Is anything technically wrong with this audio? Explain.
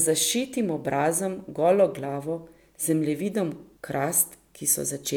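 No, nothing technically wrong stood out on listening to this speech clip.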